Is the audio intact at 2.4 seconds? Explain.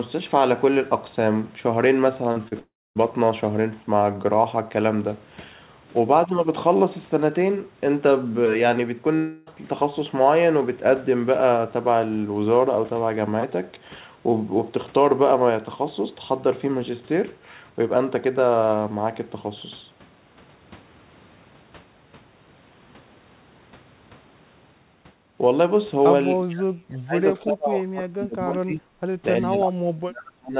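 No. Short concealed packet loss hits at 2.32 to 2.39 s and again at 2.48 to 2.55 s. About 40 ms of audio never arrived each time, and the receiver filled the gap by extending the preceding sound before blending back, leaving brief smeared wobbles around that moment.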